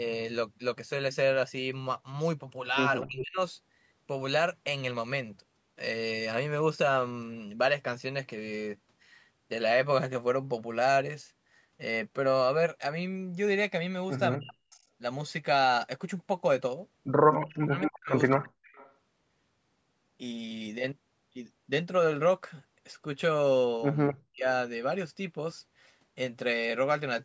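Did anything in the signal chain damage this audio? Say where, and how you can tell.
Yes. The speech dips by about 40 dB at 3.02–3.39, 14.36–14.83, 17.35–18.63 and 24.14–24.46 s, likely speech suppressed in double talk by the call's echo canceller.

A 240 ms delayed copy appears at 3.19, 17.3–17.96, 18.63–18.93 and 24.08–24.15 s, likely echo leak the loudspeaker-side canceller failed to remove.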